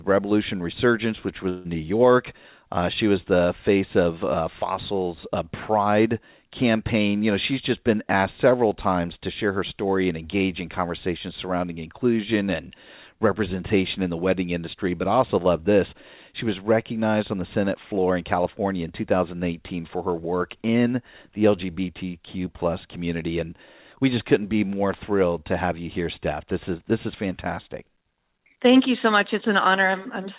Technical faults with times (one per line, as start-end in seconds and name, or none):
1.49-1.67 long network dropout